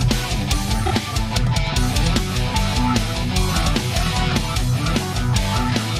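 At 0.85 to 0.91 s, repeated frames: one 26.1 ms block, fitting a single compressed frame, plays twice more, adding 52.2 ms and producing a brief stutter.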